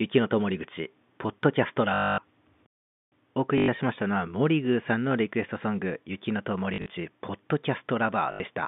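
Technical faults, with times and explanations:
1.94–2.18 s, 3.58–3.68 s, 6.74–6.90 s and 8.32–8.40 s: packet loss with last packet repeated. Each time, the same short slice of sound is replayed until fresh audio arrives, producing a robotic stutter that buzzes at the packet rate. Losses of 240, 100, 100 and 80 ms fit 20 ms packets, putting the buzz near 50 Hz. At 6.74 s the loss is scattered over 160 ms in runs of at most 40 ms, so it flutters. Unlike a dropout there is no silence.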